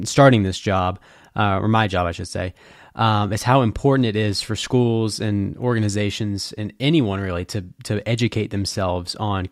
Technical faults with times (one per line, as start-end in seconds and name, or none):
none